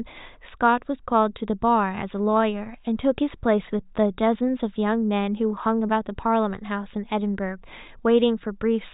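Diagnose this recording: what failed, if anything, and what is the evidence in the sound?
Nothing in the recording stood out as a fault on listening, so there is no failed stage to point to.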